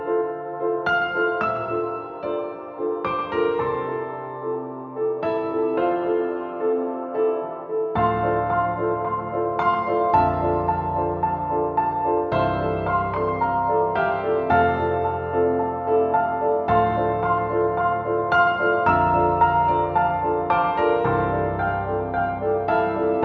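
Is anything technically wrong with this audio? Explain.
No, nothing stood out as a technical problem on listening, and the audio simply carries the sound of call microphone processing, with nothing above about 8 kHz and the lowest bass trimmed away as that kind of processing normally does.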